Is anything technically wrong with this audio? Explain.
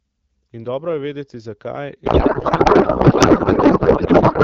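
Yes. From 2.05 s to the end at 4.44 s, just after "dobro je vedeti zakaj", there is a codec payload misread. The AMR bits are unpacked with the wrong layout, which fits octet-aligned frames being read as bandwidth-efficient ones. The decoder places every field wrongly, so the speech becomes garbled noise and warble that barely follows it. Before this point, the AMR wideband (HD Voice) coding sounds clear, consistent with about 12.65 kbit/s.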